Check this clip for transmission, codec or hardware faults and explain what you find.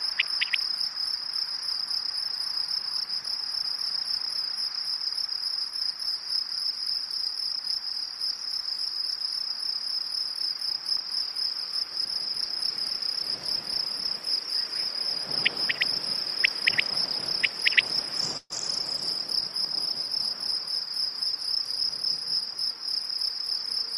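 One fault, a burst of packet loss, appears from 18.37 to 18.53 s. The sound freezes into a held, fading continuation of itself for about 124 ms, drops to brief silence, then resumes about 120 ms further on. Consecutive packets never arrived, so the receiver stretched and faded the last audio it had.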